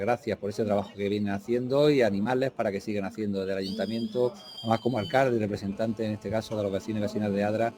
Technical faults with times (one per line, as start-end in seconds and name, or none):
2.23-2.27 short concealed packet loss
4.55-5.74 GSM signalling bursts
5.75-7.78 GSM phone buzz